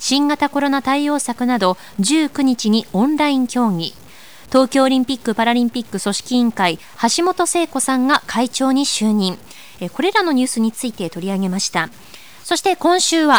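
From start to finish the speech carries a grainy, rasping distortion that rides on the voice itself, swelling and thinning as the level moves rather than sitting as a steady hiss. Soft syllables and decaying word endings turn gritty and sputter, and the quietest moments drop abruptly to silence. This is the sound of low bit depth without dither, likely around 7 bits with plain truncation, leaving signal-tracking error roughly 30 dB below the speech.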